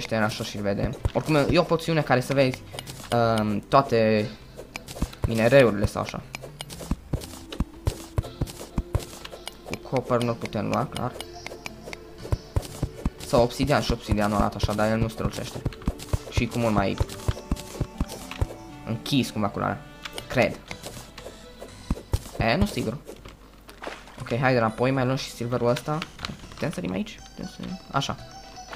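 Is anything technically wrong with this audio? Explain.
Yes. At 0.93 s there is damaged data in a compressed stream: corrupted bytes throw the decoder out of sync, giving a brief blip.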